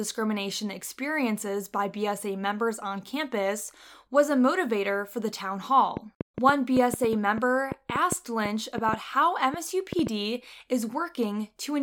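A train of clicks runs from 5.97 to 10.08 s in this speech clip, starting after "motivator for the town": around twenty similar pops at an uneven 4.9 per second, peaking roughly 10 dB above the speech, likely from electrical interference or a faulty connection or power supply.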